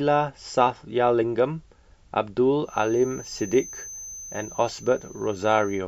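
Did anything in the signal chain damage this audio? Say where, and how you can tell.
Yes. From 2.61 s to the end of the speech a feedback whistle sits at 6.2 kHz, roughly 20 dB below the voice, thin and steady, slowly swelling and fading in level. On a spectrogram it is one unbroken horizontal line. The likely cause is an acoustic loop between loudspeaker and microphone held just at the edge of feedback.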